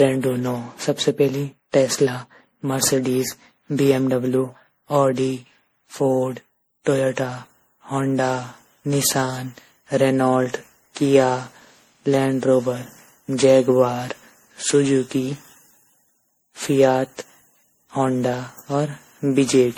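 Speech, with generation loss across the whole clip. It sounds swirly, hollow and smeared, with blurred attacks, worse than a single encode would explain. This is likely from repeated lossy passes, around ten, in a chain that fits MP3 at 64 kbit/s.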